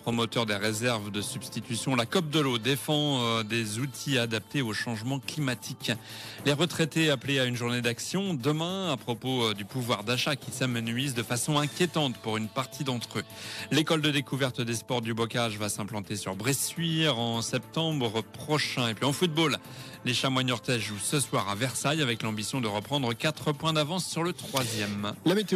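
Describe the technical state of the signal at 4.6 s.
At 4.6 s the signal is intact, with no audible fault at that moment.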